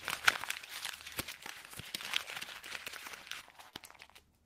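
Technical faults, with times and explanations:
1.37 to 1.71 s, jitter buffer speed-up: the receiver's jitter buffer was holding more audio than its target, so it trimmed the excess by cutting out short stretches of roughly one or a few pitch periods, repeatedly, across this span. About 40 ms disappears in total, which makes the sound play at roughly 111% speed while its pitch stays unchanged. The result is a brief hurried quality, with events arriving slightly early relative to the surrounding rhythm.
3.70 to 3.76 s, short stall from a late packet: a packet had not arrived when it was due, the jitter buffer ran dry, and the receiver covered the gap by extending the preceding sound for 32 ms until the data turned up. Playback then resumed at the exact point it had stopped, so nothing is lost, but the sound is held a little too long, with a faint buzz or dip, and everything after it sits 32 ms later.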